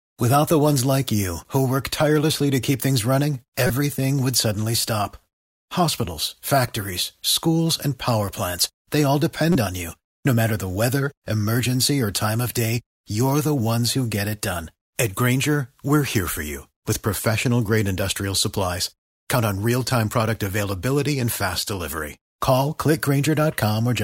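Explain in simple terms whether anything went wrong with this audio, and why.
Corrupt frame decoded: damaged compressed data was played anyway, so brief bursts of misplaced sound appear at 3.67 to 3.70 s and 9.52 to 9.56 s.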